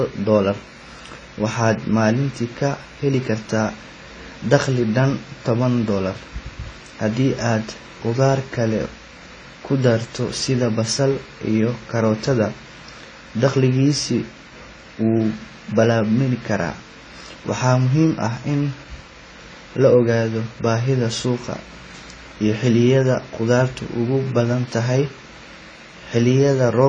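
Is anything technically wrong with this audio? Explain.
Yes, the whole clip carries AAC compression damage, and it's plainly audible. Nothing gets above about 9.9 kHz, so the speech sounds dull and boxed in, with a swirly, fizzy edge on sibilants and held vowels. That's likely AAC-LC squeezed to a low bitrate, roughly what you'd expect around 24 kbps: the encoder drops the top band to save bits and quantises what's left coarsely, leaving smeared, warbling detail.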